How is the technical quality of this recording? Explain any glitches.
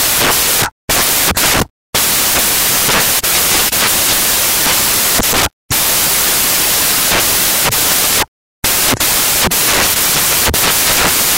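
Poor: the whole recording is corrupted by samples built from the wrong bytes. From start to finish, the reader has assembled each sample from mismatched bytes, whether shifted by one, swapped in order or misaligned, so the rapidly fluctuating low-order bits end up as the dominant part of every value. The result is loud, harsh broadband noise covering the entire clip, close to white on the louder passages.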